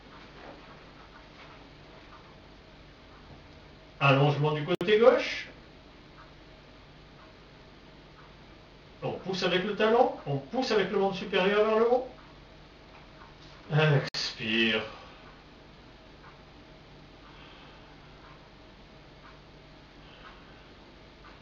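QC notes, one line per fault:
4.75 to 4.81 s and 14.09 to 14.14 s: gap at a join of encoded pieces. The sound stops for about 60 ms, then carries on from where it stopped. The pieces were encoded separately and joined untrimmed. Encoder start delay and last-frame padding stay in as silence with smeared edges.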